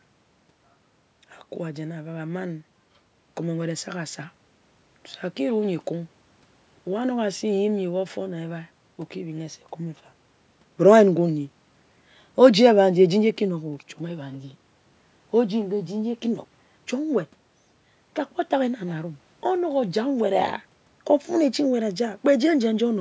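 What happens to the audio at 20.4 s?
At 20.4 s the speech continues intact, with no dropout, click, distortion or other fault at that moment.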